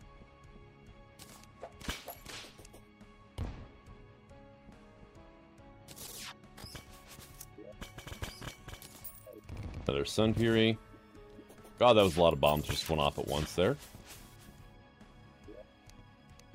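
From 15.02 s to the end at 16.55 s, the audio carries a crude rate conversion. Samples were repeated rather than properly resampled, which fits a conversion from 44.1 kHz to 48 kHz. The stepped error repeats in a fixed cycle and produces a gritty, inharmonic fizz roughly 25 dB below the signal, strongest on loud and bright passages. A spectrogram shows faint spurious lines and haze unrelated to the true partials, and a zoomed waveform shows tiny stair-step discontinuities.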